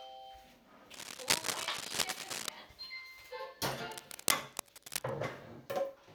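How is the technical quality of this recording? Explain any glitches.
The recording is marred by two bursts of cable scratch noise, from 0.94 to 2.49 s and from 3.91 to 5.12 s: dense, uneven scratching that sits a little louder than the sound, likely from a worn cable or connector shifting its contact resistance.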